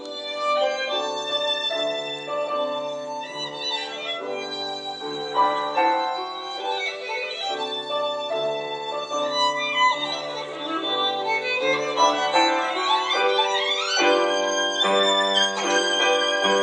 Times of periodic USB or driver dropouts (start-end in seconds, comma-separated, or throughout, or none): none